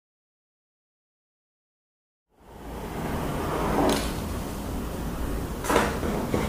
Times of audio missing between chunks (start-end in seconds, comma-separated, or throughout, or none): 4.74